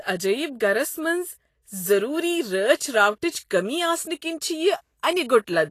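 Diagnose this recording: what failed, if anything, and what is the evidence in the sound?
Codec stage, likely Vorbis compression: across the whole speech clip the treble turns hissy and grainy, and nothing sounds above 14.2 kHz. Coarsely quantised residue swaps fine detail for noise, pointing to a low bitrate near 34 kbps. A plain low-pass would sound dull, not granular.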